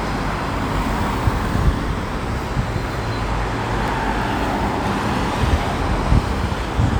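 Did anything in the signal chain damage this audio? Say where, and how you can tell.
Yes. The damage happened in the streaming stage, as an overlap between stream segments. At 3.88 s the sound jumps with a tiny skip. The stream appears to be cut into 1-second segments. Two of them had overlapping time stamps. The player trimmed the supposed duplicate, but that material was never doubled. A few milliseconds of real sound went missing, and the waveform broke.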